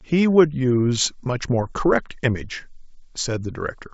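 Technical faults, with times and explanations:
1.63–1.67 s and 3.66–3.70 s, bit errors on an ADPCM link: a small share of flipped bits in the G.722 stream knocks the decoder's step size and predictor off track. Each error sounds like a pop and a rough burst with a brief level change that rings on for some milliseconds. Packet loss instead leaves gaps or smoothed-over concealment.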